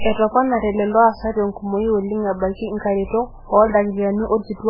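A speech recording with heavy MP3 compression damage all the way through: nothing above 5.3 kHz, and watery, swirly smearing that suggests a very low bitrate, likely around 8 kbps.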